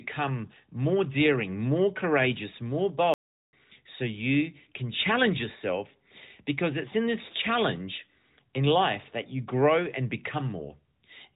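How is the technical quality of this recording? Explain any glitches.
Speech comes through a narrowband mobile path, with nothing above about 4 kHz, which fits AMR narrowband at around 12.2 kbps. There's one real glitch. From 3.14 to 3.53 s the audio drops out for about 0.39 s, then resumes. That's likely a playback stall, with the player starved of data or its thread blocked.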